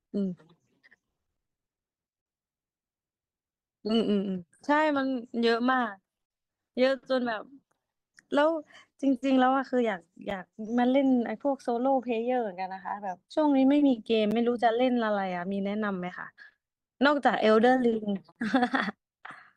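Speech cut by brief, hard-edged dropouts to silence at 6.26 to 6.30 s, 10.30 s, 14.31 s and 18.32 to 18.36 s, the first and last about 45 and 40 ms long, the middle two only 7 to 9 ms. They fall every 4 s, marking a gap between stream segments: the timestamps of consecutive 4 s segments leave a small hole that the player fills with silence, so time is added but no audio is lost.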